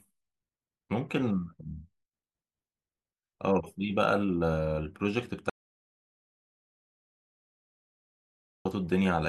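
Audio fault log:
5.50–8.65 s, audio dropout to silence: the speech cuts off abruptly mid-flow and returns just as suddenly, with about 3.16 s of silence between, not even room tone. The input was likely lost, through a disconnected device, a failed link or a mute, while recording carried on writing silence. On a waveform the trace collapses to a flat line; a spectrogram shows a sharp-edged, empty block across all frequencies.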